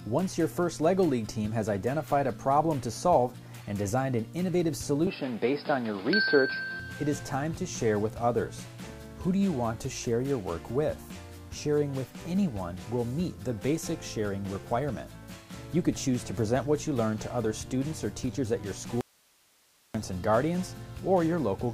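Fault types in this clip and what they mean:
Input switched to a poorer device: the system likely changed to a lower-grade microphone or headset path from 5.07 to 6.8 s, so nothing above 5.2 kHz gets through; the sound turns dull and boxy with no gap at the switch, no clear level jump, and a new noise floor about 40 dB down.
Audio dropout to a faint residue: the wanted signal was likely lost for 0.94 s at 19.01 s while the path stayed open, so the sound cuts off abruptly and the gap holds only hiss, roughly 35 dB below the normal level, before it returns.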